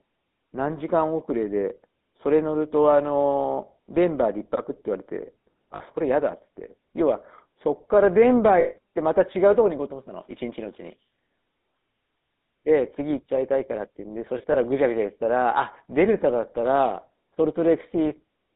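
Throughout the speech, the GSM full-rate codec is plainly audible, which fits the 13 kbps full-rate coder. It models the vocal tract and drives that model with coarse, regularly spaced pulses, leaving a buzzy, gravelly roughness. The line band runs from about 200 Hz to 3.7 kHz. On a spectrogram, energy stops sharply at 3.7 kHz, with an empty low strip under 200 Hz and smeared, grainy harmonics in between.

Lost GSM frames interrupt the speech three times. At 5.76 to 5.82 s, a 40 ms gap is bridged by replaying the last good frame, heard as a brief metallic ring. At 8.60 to 8.77 s, the loss lasts 160 ms. The ring holds longer, so the waveform shows a repetitive stretch and the spectrogram shows frozen bands. From 14.38 to 14.57 s, 60 ms of loss is scattered across 160 ms in runs of only an instant each. This gives a stuttering, rough flutter with thin vertical streaks rather than one clear hole.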